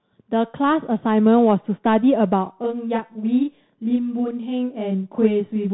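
From the first moment the whole clip carries the Bluetooth CVSD headset codec, consistent with its 64 kbps one-bit stream. Nothing above 3.8 kHz survives, s sounds turn scratchy, and a granular hiss sits under the speech. That grit and step-size distortion on loud high sounds set it apart from a clean telephone band-limit.

From 2.46 s to the end, a channel delay (doubling) appears. One channel lags by 32 ms, which fits a 512-sample buffer, and summing to mono lays an equal-level copy behind the original. The result is a fixed slap or doubling, not a decaying room echo or a comb-filtered flanging sweep.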